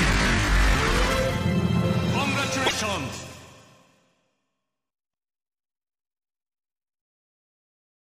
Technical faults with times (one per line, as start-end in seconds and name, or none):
2.65-2.74 broken MP3 bit reservoir